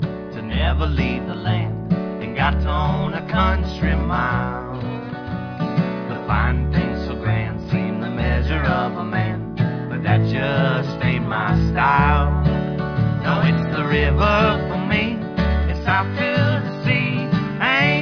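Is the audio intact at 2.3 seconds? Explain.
Yes, at 2.3 seconds the audio runs continuously with no dropout, click, distortion or other fault.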